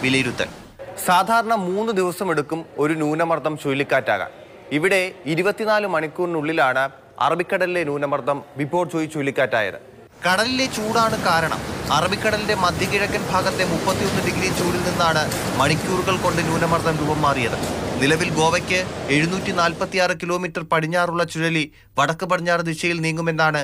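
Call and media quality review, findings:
No audible faults found; no issues to raise against any component in the path.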